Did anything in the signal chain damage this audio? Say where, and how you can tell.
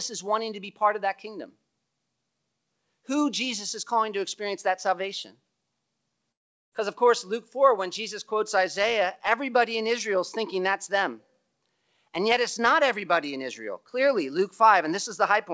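Yes, at the network stage. From 6.32 s to 6.74 s the speech breaks off: about 0.4 s of audio never arrives, and the receiver papers over the gap by extending the last sound as a fading buzz or hiss that decays to near silence before normal audio resumes, with the missing portion simply gone. That pattern points to a long network dropout, likely lost packets, concealed by the jitter buffer. The G.722 call path's band limit at 8 kHz is its normal behaviour and is not part of the fault.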